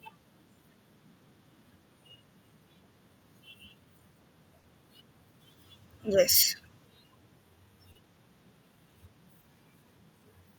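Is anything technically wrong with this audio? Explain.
Yes. At 4.59 to 4.65 s, 7.91 to 7.97 s and 9.41 to 9.45 s the speech briefly smears or wobbles. That is short concealed packet loss: 40, 40 and 20 ms of audio arrived too late, and the receiver extended the preceding sound to cover each gap.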